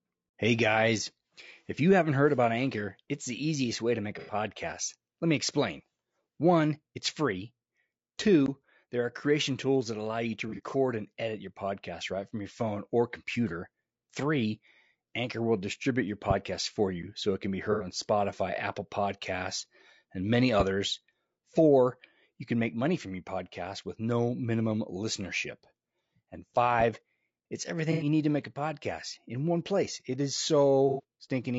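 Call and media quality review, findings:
Rough, grainy speech throughout. Noise between harmonics, synthetic top band. Likely low-delay AAC compression (AAC-ELD); short frames resolve pitch poorly, damage fits roughly 32 kbit/s.

Smeared, noisy patches at 4.19–4.33 s, 10.49–10.75 s (after "that allow you to"), 17.72–17.87 s (after "so it can be"), 27.92–28.06 s, 30.89–31.03 s. AAC frame loss with concealment; about 90 ms each.

Sharp loud pops at 16.31 s, 20.60 s, 26.80 s; about 10, 15, 10 dB above speech. Speech continues underneath. Likely single voltage pulse, from a switch or static.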